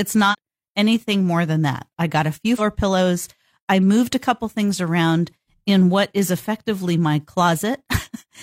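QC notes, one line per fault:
0.28–0.35 s and 2.56–2.61 s, damaged data in a compressed stream: a short chirp or squawk of about 70 ms, then about 50 ms, cuts into the speech as corrupted bytes make the decoder misread those frames and lose sync until it finds the next valid frame header.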